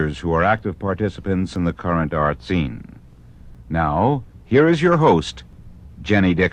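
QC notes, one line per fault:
0.59 s, block of digital silence: a single sharp tick, far too brief to hear as a gap. For about 0.73 ms the output drops straight to silence and returns with no fade, which fits a block of roughly 32 samples left unfilled, so it is heard as a tick.
1.56 s, 3.55 s, 5.53 s, overlap between stream segments: a small click or skip each time, spaced almost exactly 2 seconds apart. Roughly 6 to 16 ms of sound is cut where adjacent 2-second segments' time stamps overlap, so the waveform jumps across the seam.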